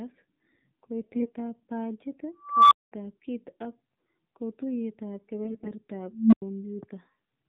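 The whole speech clip runs through the AMR narrowband mobile codec at 7.4 kbps. Nothing above 4 kHz survives. The voice is band-limited and thin. At this low bitrate the vocal-tract model gets few pulses per frame. So the voice sounds buzzy and synthetic, and the codec damage is plainly audible.

From 1.02 to 1.32 s come AMR bit errors. The weakly protected bits of each frame arrived flipped, but the frames were still decoded. This points to roughly a dozen damaged frames, with an error rate around 7 percent. Pitch and level hold roughly steady. The voice turns hoarse and gargly.

From 2.42 to 2.92 s an unstable filter takes over. Bad coefficients let a recursive filter feed on itself. A tone near 1 kHz swells over about 288 ms and clips. Then the output cuts to silence for about 209 ms until the filter resets. It is a loud squeal and then a gap. Speech resumes with "kit ak kotuyet ab".

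Just after "kit ak kotuyet ab", AMR bit errors return from 5.44 to 5.71 s. The error rate is higher here, around 10 percent. The voice again turns scratchy and gargly.

From 6.11 to 6.42 s the unstable filter fails again. This time the tone is low, near 200 Hz. It builds over about 213 ms, clips, and drops out for about 93 ms.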